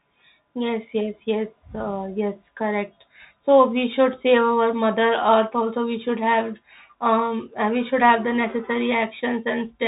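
A speech recording that sounds thin and muffled throughout, with nothing above 3.8 kHz, plus scratchy sibilants and grainy hiss: the Bluetooth CVSD headset codec, consistent with 64 kbps one-bit delta coding.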